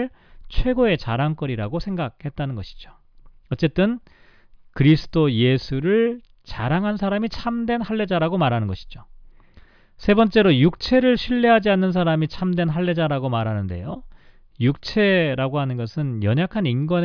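No fault is audible anywhere in the speech recording.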